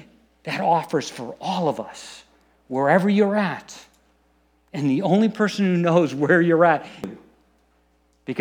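At 7.04 s the speech is broken by a short burst of damaged data in the compressed stream. Corrupted bytes caused the decoder to misread a frame, lose sync and hunt for the next valid header, producing a brief chirp, squawk, click or short hole.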